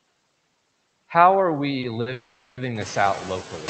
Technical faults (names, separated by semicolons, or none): noise suppressor artifacts; short stall from a late packet; call audio freeze